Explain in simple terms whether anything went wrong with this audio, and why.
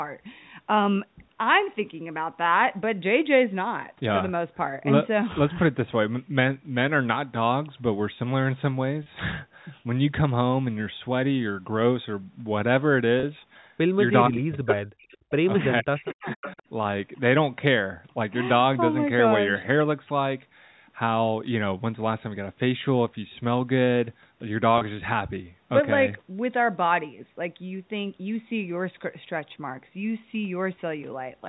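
Three brief glitches at 9.03 s, 13.2 s and 24.78 s are packet loss with pitch repetition. About 30 ms of audio went missing each time, which points to one lost network packet. The receiver filled each gap by repeating the last pitch cycle, so it sounds like a short, slightly buzzy held tone.

From 14.28 to 15.32 s and again from 15.81 to 16.58 s, the talker's sound drops sharply. This is likely speech suppressed in double talk: both sides spoke at once, and the echo canceller turned everything down because it could not tell the talker from the returning loudspeaker sound.

Overlapping those stretches there is echo leak, a delayed copy of the sound arriving about half a second late. A short scrap appears at 14.68 to 14.75 s, and a longer, quieter one at 16.31 to 16.62 s. The likely cause is a loudspeaker on one end whose echo canceller did not fully remove what its microphone picked up.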